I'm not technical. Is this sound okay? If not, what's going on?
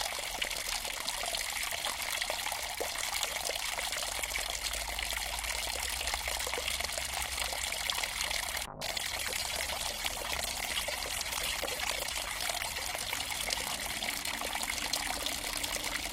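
No. From about 8.67 to 14.77 seconds there is a call bitrate drop. The call suddenly sent far less detail, so the sound turns rough and muffled, with the top end dulled. It is worst for about 3.5 seconds, then recovers.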